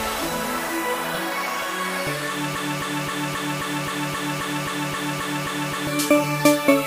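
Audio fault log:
2.55–5.87 s, broken-record loop: a 265 ms snippet repeats 13 times back to back, likely from a stall resending its last chunk, so the real audio there is lost.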